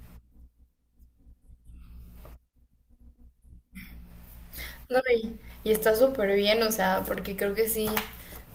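No technical faults can be heard anywhere in this speech recording. Nothing in the audio points to a problem with how it was captured, processed or played back.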